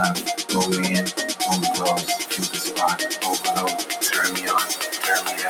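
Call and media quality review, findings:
Noise suppressor applied to music or sounds, throughout. Held portions and decaying tails pump down, roughly 10 dB. Onsets pass intact. Probable component: speech noise suppression left enabled on the media path. It treats sustained tones, ambience and reverb as noise and attenuates them. Result: fluttering, thinned sustain between attacks.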